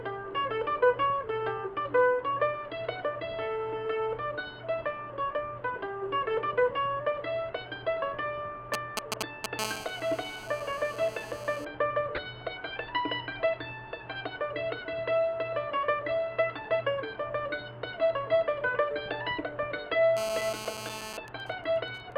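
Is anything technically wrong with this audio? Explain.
Yes. A nearby 2G phone has been picked up and rectified by the audio circuit, and a damaged compressed frame was decoded and played.

GSM signalling bursts occur from 8.74 to 9.6 s, at roughly the same level as the sound, and again from 21.28 to 22.13 s, much quieter at around -25 dB. The second run fits a phone in a call whose user has gone silent. The first is a galloping dit-dit-dit of short buzzes, and the second is even ticks with a longer buzz twice a second. The waveform shows clustered spiky pulses, and the spectrogram shows intermittent vertical striping.

GSM phone buzz runs from 9.6 to 11.65 s at about -12 dB and from 20.17 to 21.17 s at about -8 dB. The phone transmits 217 pulses per second, and the circuit demodulates them into a hard, raspy 217 Hz buzz. On a spectrogram it is a dense comb of horizontal harmonic lines, and on the waveform a rigid pulse train.

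A corrupt frame decoded at 12.16 to 12.18 s is a single damaged frame, peaking around -20 dBFS. The wrongly read gains and codes put energy in the wrong frequencies, giving a brief chirp or blip. It appears as an isolated block, one frame wide, on the spectrogram.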